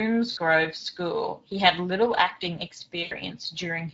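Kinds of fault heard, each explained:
Speex codec: old CELP voice coding whose plainly audible damage makes the speech noisy and hoarse throughout, which fits a setting around 16.8 kbps.
VoIP packet loss concealed by the speech codec: gaps at 0.31–0.39 s and 3.03–3.14 s get patched by stretching the previous sound into a fading buzz or coloured noise.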